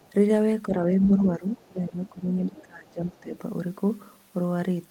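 Right at the start, from 0.00 to 0.12 s, there's a faint scrap of the other side's voice leaking through, sitting about 35 dB under the speech. It's likely leftover loudspeaker echo the echo canceller didn't fully scrub from the mic. The same thing pops up again, just as faint, at 1.58 to 1.69 s and briefly at 2.05 to 2.09 s. Then at 2.44 to 2.62 s it's more obvious, only about 25 dB down.

You also get speech suppressed in double talk, where the talker dips while the far end is talking. At 0.68 to 0.81 s it's a light duck of about 5 dB. From 0.99 to 2.27 s it gets deeper, up to around 15 dB, and pulls the voice down for roughly 0.7 s in total. At 2.46 to 3.35 s it's the worst, dropping around 25 dB over about 0.7 s. The likely cause is the canceller failing to separate the near talker from the echo and pulling both down together.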